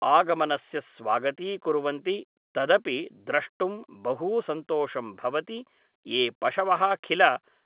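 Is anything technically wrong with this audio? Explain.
No, nothing is technically wrong: the speech is carried as mu-law G.711 telephone coding at 8 kHz, so its band stops at 4 kHz, as that format requires.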